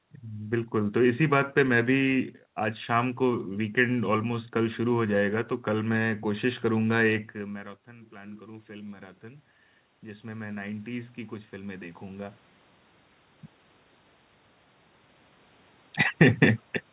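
Automatic gain rising affects this speech recording: after the talker moves away from the microphone around 7 s and the level at the input drops by about 20 dB, the gain control slowly climbs by about 11 dB between 7.53 and 12.47 s. Voice and room noise swell together over those five seconds. The talker moves again near 12.5 s. The call path's band limit at 4 kHz fits narrowband G.711.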